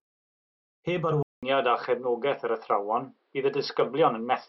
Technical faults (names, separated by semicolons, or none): input switched to a poorer device